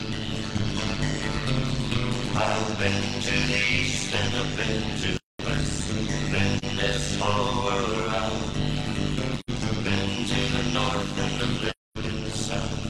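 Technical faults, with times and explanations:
throughout: overlap-add ripple. The level pulses at around 100 Hz with a depth of about 60 dB, heard as a metallic buzz with extra tones around each note. The frames were resynthesised with an overlap whose windows do not sum to constant gain, so loudness dips once per frame.
5.17–5.39 s: playback stall. The audio halts abruptly for 220 ms of silence, then resumes. This was likely caused by the player running out of buffered data or a blocked output thread, leaving nothing to play until it recovered.
6.58 s, 9.39–9.50 s, 11.70–11.98 s: AAC frame loss with muting. There are soft-edged dropouts of about 43, 85 and 256 ms, consistent with one, two and six lost frames. The decoder zeroed their spectra, and the overlapping windows fade the sound out and back in.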